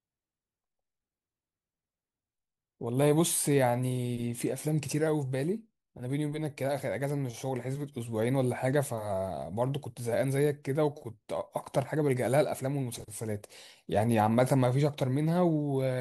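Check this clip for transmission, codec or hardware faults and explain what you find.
Checking the clip turns up no faults to explain.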